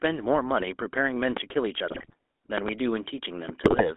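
The recording is speech carried through the GSM full-rate codec for its whole length. The sound is buzzy and gravelly, and the band is confined to roughly 250 Hz to 3.6 kHz. The vocal tract is modelled and driven by sparse, regularly spaced pulses, which fits a 13 kbps GSM voice channel. The codec damage is plainly audible. A loud pop strikes from 1.37 to 1.39 s, about 15 dB above the speech, as a single sharp hit. A second loud pop event, from 2.58 to 2.71 s, is a double pop at a similar level. Both are likely from an electrical step, such as a plug, switch or static discharge, added on top while the speech continues underneath. GSM bit errors occur from 1.88 to 2.14 s and again from 3.64 to 3.91 s. In these spans the speech breaks into squawks and gargling. Corrupted filter, pitch and gain values bend the spectrum and make the level jump from frame to frame.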